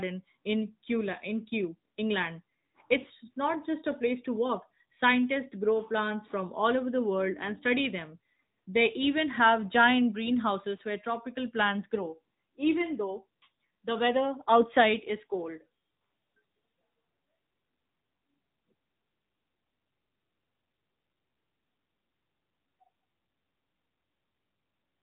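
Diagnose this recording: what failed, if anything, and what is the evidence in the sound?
The failure is at the codec stage. The speech has passed through the AMR narrowband mobile codec, and the damage is plain for the whole clip. Nothing above about 3.8 kHz survives, so the sound is dull and boxed-in. The voice has a buzzy, synthetic edge. AMR-NB models the vocal tract and drives it with a few pulses per 5 ms. The degree of artefacting points to a mid-rate mode, around 10 kbps.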